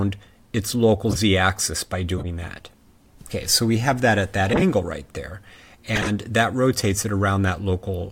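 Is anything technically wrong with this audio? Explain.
Yes: corrupt frame decoded at 1.10–1.20 s, 2.18–2.26 s, 4.46–4.62 s and 5.93–6.10 s. Damaged compressed frames were played anyway, spraying misplaced energy as chirpy noise bursts peaking around -5 to -15 dBFS, not the gaps or smeared repeats of lost frames.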